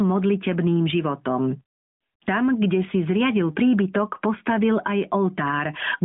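Gain pumping runs through the whole of the speech. The gain swings by roughly ten decibels, pulled down as each loud syllable arrives, so loud and quiet passages sit unnaturally close in level and the sound feels squashed. The likely cause is input gain set far too high, with a fast limiter or compressor clamping down on every peak. A noise gate would cut the gaps to silence rather than pumping the level. The narrowband AMR mobile codec path, with nothing above about 3.8 kHz and only light coding texture, fits the 12.2 kbps mode and is working as it should.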